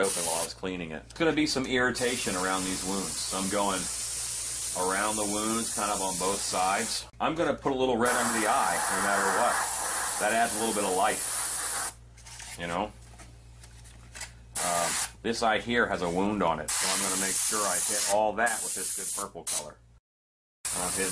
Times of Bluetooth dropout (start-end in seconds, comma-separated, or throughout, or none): none